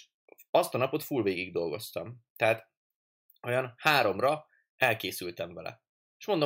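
Around 3.86 to 3.9 s there's microphone overload: the loudest peak in this speech pushes roughly 4 dB past the converter's ceiling, with around 2 percent of samples flattened. The input gain was likely set too high, so the peak tops get sheared off and you hear a brief harsh crackle.

Then at about 4.02 s the microphone volume steps down by about 1 dB, so voice and background dip together in one small, sudden notch. That's likely the call software reacting to the clipped peak just before it and pulling the input gain back a notch.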